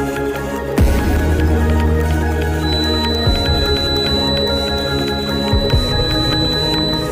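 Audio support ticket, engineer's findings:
Feedback whistle, 2.58 s to end of clip. Likely cause: loudspeaker-to-microphone loop held at the edge of instability, loop gain just short of runaway. Result: thin, sustained tone at 4 kHz, about 5 dB below the main sound, swelling and fading slowly in level without building.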